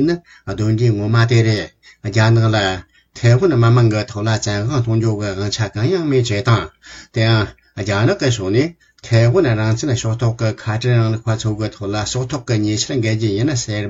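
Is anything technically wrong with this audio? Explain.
No, nothing technically wrong.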